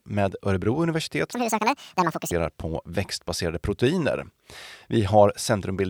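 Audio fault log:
1.33–2.32 s, section at the wrong speed: speech plays 1.74 times fast and nearly an octave higher, likely from a wrong clock; spectrogram harmonics jump upward, waveform looks squeezed.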